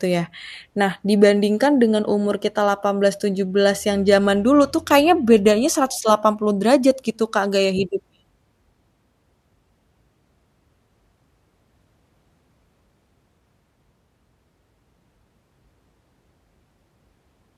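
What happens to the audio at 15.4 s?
Nothing goes wrong at 15.4 s; the speech carries on intact through that moment, with no dropout, click or distortion.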